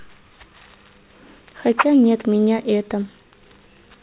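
Aliasing runs throughout this speech: a drop from 16 kHz to 8 kHz without filtering folds energy above 4 kHz back down, leaving sibilants gritty and metallic, roughly 10 dB below the signal.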